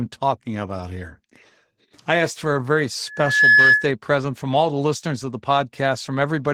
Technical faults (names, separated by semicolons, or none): Opus voice compression; loudspeaker feedback squeal